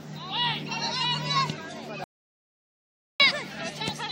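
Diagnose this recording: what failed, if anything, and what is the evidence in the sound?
Audio dropout to silence, 2.04–3.20 s: flat silent waveform and blank spectrogram with no room tone, likely an input-link failure while writing continued.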